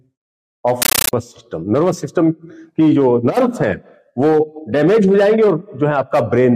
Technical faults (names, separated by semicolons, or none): compressed stream played as audio